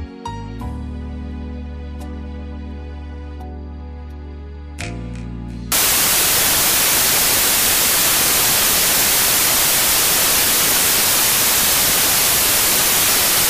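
From 5.72 s to the end, loud, harsh broadband noise replaces the audio: samples built from the wrong bytes, misaligned or swapped, so rapidly changing low bits dominate each value.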